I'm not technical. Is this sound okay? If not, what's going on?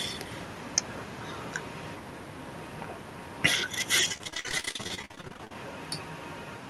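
No. From about 4.12 to 5.55 s the speech breaks up with repeated packet loss, which gives it a robotic sound. Pieces of the audio went missing over and over during that stretch, each gap lasting up to about 48 ms. To hide each hole, the call system kept repeating the last bit of sound it had. About half of that stretch is filled in this way, so the speech turns choppy.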